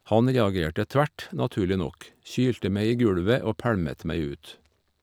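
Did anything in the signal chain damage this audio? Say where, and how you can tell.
No, nothing in the signal chain audibly damaged this speech recording, so no stage can be pointed to.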